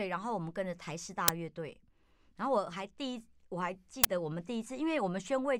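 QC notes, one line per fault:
1.28 s and 4.04 s, uninitialised buffer: blocks of about 5 ms and 10 ms were played before audio was written, so stale memory comes out as loud digital noise. On the waveform each shows as a sudden dense block at high amplitude, and on the spectrogram as a thin full-band vertical stripe.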